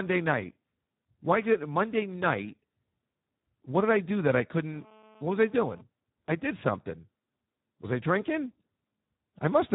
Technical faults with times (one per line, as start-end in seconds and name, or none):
0.00-9.74 Speex codec